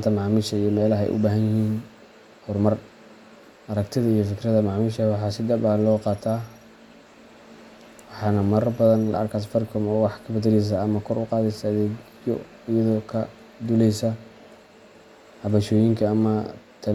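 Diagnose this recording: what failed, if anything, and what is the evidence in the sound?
Nothing in the signal chain failed: the speech arrives continuous and steady, with no audible break or disturbance attributable to any stage from capture to playback.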